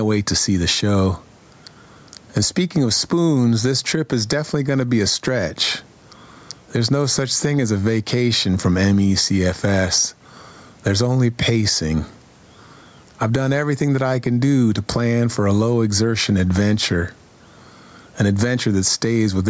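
Throughout the speech there is gain pumping. The faint room noise sits about 41 dB below the speech, and the gain swings by around 10 dB. The likely cause is input gain set far too high, with a fast limiter pulling it down on every peak. On a waveform the envelope looks squashed and even, with the noise floor bulging between phrases. A spectrogram shows the background band brightening in each gap, and nothing above 8 kHz from the call's microphone processing.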